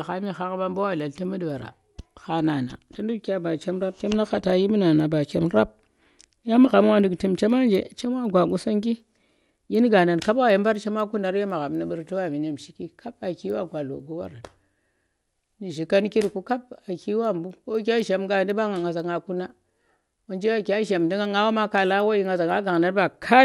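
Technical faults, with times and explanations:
throughout, resampler restarted on every block: each 250 ms block was converted alone, so every boundary carries a small error, heard as ticks at 4 Hz during the speech.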